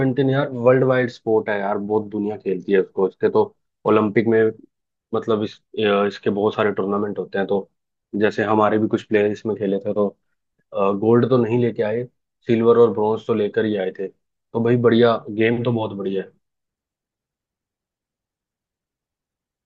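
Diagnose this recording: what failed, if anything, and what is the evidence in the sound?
Nothing stood out on listening to this speech recording, and no stage of the chain gives itself away with any audible failure.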